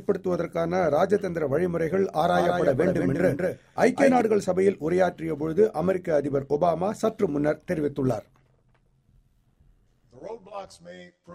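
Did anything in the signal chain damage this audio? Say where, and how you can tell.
Yes. Overlap-add ripple runs throughout, from frame-based processing whose windows don't sum evenly: the level swings about 6 dB roughly a hundred times a second, a metallic buzz.

A doubled audio track appears from 2.27 to 4.21 s: a dry full-band copy about 5 dB down, around 200 ms late, cutting in and out abruptly, likely from a slower second capture path.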